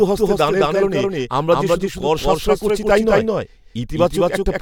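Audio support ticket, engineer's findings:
Doubled audio track, whole clip: speech repeated by a clean, equally loud copy about 200 ms late. Likely a second, slower capture path or a misaligned edit.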